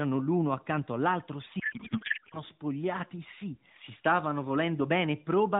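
A codec payload misread runs from 1.60 to 2.44 s. The AMR stream is packed in octet-aligned form, with fields padded to whole bytes, but it is decoded as bandwidth-efficient, so every field lands a few bits off. The frames still decode, just with the wrong parameters. For about 0.84 s the speech becomes garbled noise and warble that barely tracks it, until the packing matches again and the narrowband AMR sound, consistent with the 12.2 kbps mode, returns.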